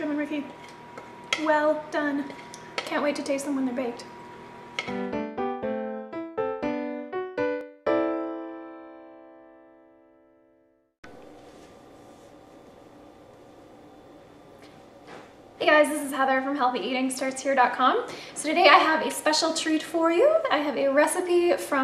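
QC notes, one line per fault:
7.61 s, dropped buffer (overrun): the sound jumps straight ahead, with no gap of silence between the two sides. About 10 ms of audio is missing, likely because the recording program fell behind and the hardware overwrote a buffer before it was read, so the pieces either side are butted together. Unlike a dropout, nothing goes quiet. The giveaway is the abrupt discontinuity and skip, not a pause or a smoothed-over fill.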